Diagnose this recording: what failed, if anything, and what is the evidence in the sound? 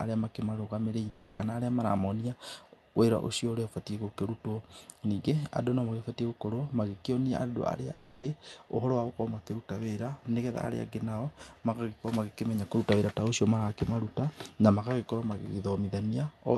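Network stage, likely a long network dropout. Speech breaks at 1.09–1.42 s, just before "arĩa maramonia", and at 7.93–8.26 s, just after "andũ arĩa". Each gap lasts 0.3 s. The receiver stretches the last sound into a fading buzz. The missing audio never returns.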